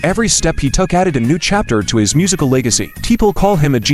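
A switching power supply falls into an audible burst mode from 2.06 s to the end, adding a faint high whistle, roughly 30 dB down, drifting between 11.7 and 12.0 kHz.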